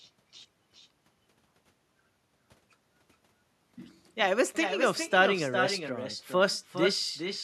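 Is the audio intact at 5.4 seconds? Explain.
No. At 5.4 seconds the speech is shadowed by a quieter, thinner copy, about 7 dB down, arriving roughly 0.4 s later. This is echo with no canceller, present throughout: the far end's loudspeaker feeds its microphone, and nothing removes the returning sound.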